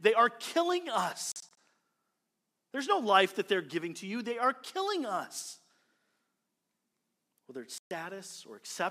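From 1.32 to 1.57 s the speech breaks into short silent holes, about 107 ms lost in all, longest 43 ms. At 7.78 s one clean 128 ms gap follows. Both are likely Bluetooth dropout: packets missed the headphones, and the speech resumes as if it had played on.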